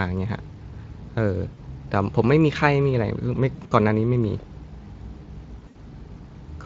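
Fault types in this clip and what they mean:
VoIP packet loss concealed by the speech codec: the Speex decoder fills missing packets by extending its last pitch and spectral envelope at falling gain, producing short buzzy or noisy, smeared patches at 1.53 to 1.60 s, 3.55 to 3.73 s and 5.59 to 5.77 s.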